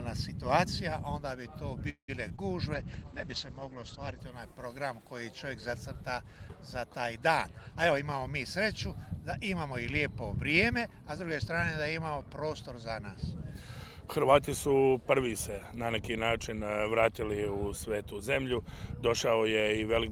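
Right around 1.89 s there's a call audio freeze, most likely packets held up in transit so the jitter buffer ran dry. The last bit of sound gets stretched into a short fading buzz, and about 100 ms of that is outright silence, with the whole stall lasting until 2.10 s. When audio resumes it picks up exactly where it left off, so nothing is lost, but everything after sits about 0.19 s later than before.

Right behind that come two short concealed packet losses, at 2.28 to 2.32 s and 2.36 to 2.40 s. Each time about 20 ms of audio never made it to the decoder in time, and the receiver papered over the hole by extending the preceding sound before blending back into the real signal. You hear them as two quick little smears.

From 2.74 s to 4.28 s there's a call bitrate drop. The encoder got squeezed from 32 kbps down to 11 kbps, sitting at the bottom for about a second and a half, and at that rate the audio bandwidth collapses from 20 kHz to 8 kHz. 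So the top end goes dull and muffled, and the coarser coding adds a rough, watery texture until the rate climbs back.

Later there are three jitter buffer speed-ups, where the receiver trims out tiny pitch-period slices to drain a backlog of buffered audio. The first, 7.71 to 8.22 s, is the most noticeable, running at 112% and cutting roughly 70 ms. Then 8.90 to 10.01 s at 104%, dropping around 50 ms, and 10.54 to 11.53 s at 106%, about 70 ms again. Pitch stays put, but the timing feels hurried in the first and third.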